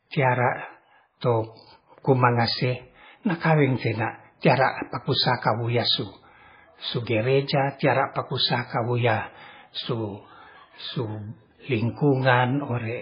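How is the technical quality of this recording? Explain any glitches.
The quality is poor throughout. The speech sounds dull and watery, with a swirling, bubbly texture and metallic chirps on the s sounds. Nothing reaches above 5 kHz, so the top end is simply gone. These are MP3 compression artefacts, and the damage is heavy. The likely cause is an MP3 encoder starved of bits, which fits a bitrate near 16 kbps. To save bits it cut the treble at a fixed point and dropped the weaker frequency lines, which flicker on and off from frame to frame and make the sound swirl.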